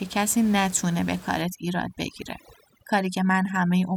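Overdone noise removal from 1.42 s to the end of this speech clip cuts frequency bands near the noise estimate, leaving the room noise (about 20 dB down) as twinkling near-silence.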